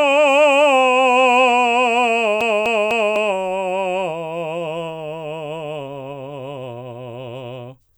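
From 2.41 s to 3.16 s the music falls into a CD stuck on one turn: the same quarter-second of audio, about 0.25 s long, plays three times in a row, each pass cut off by a brief mute as the laser jumps back a track over a scratch. It sounds like a quick, even stutter. On the waveform the same short block repeats with gaps between, and a spectrogram shows an identical slice stamped three times with thin vertical breaks.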